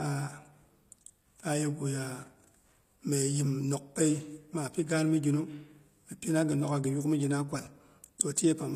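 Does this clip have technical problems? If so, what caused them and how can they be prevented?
Yes. Across the whole speech clip the treble sounds synthetic and gritty, with nothing above 15 kHz, so the likely cause is HE-AAC compression, at a bitrate that fits about 24 kbps. Spectral band replication rebuilds the highs from copied lower bands, so s sounds turn lispy and metallic rather than simply dull, as plain low-pass filtering would leave them. Encoding at a higher bitrate, or with plain AAC instead of HE-AAC, prevents this.

At 8.18 s there is pre-echo: a short hiss about 14 ms long leads into a sharp attack. The codec spread the noise for the loud onset back through its block into the silence before it. Because the hiss comes only before the onset, it is not an echo or reverb tail trailing afterwards. A codec with shorter transform blocks for transients, or a higher bitrate, prevents it.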